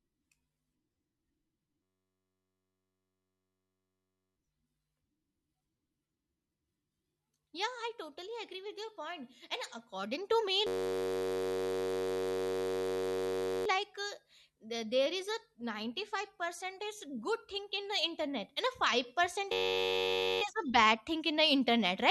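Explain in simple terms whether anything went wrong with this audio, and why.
The computer froze three times while the sound hardware kept replaying the same tiny slice of audio, a fault called a system hang loop. Each slice is about 10.7 ms long, which fits a 512-sample buffer, so instead of speech you hear a steady buzz at roughly 94 Hz. It happens from 1.82 to 4.36 s, from 10.67 to 13.66 s right after "according to me", and from 19.52 to 20.42 s. Little or no speech seems to go missing.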